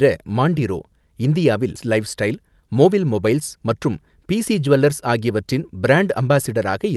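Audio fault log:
1.75–1.87 s, skip ahead: roughly 400 ms of speech was discarded while later audio waited, so playback jumps forward with only a tiny join and no gap.
2.34–3.00 s, jitter buffer speed-up: an overfull buffer trimmed short pitch-period pieces, removing about 50 ms, so speech runs at 108% speed with unchanged pitch and sounds hurried.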